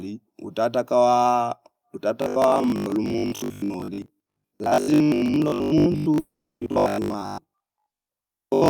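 Speech clip with two faults. From 2.22 s to the end, the voice turns robotic, a rigid metallic buzz at 50 Hz. That fits repeated short buffers of about 20 ms, likely from audio arriving too seldom, with most of the real sound skipped. From 6.19 to 6.63 s there is a long network dropout, likely lost packets. The last sound is stretched into a fading buzz or hiss, leaving 310 ms of near silence. About 420 ms of audio never returns.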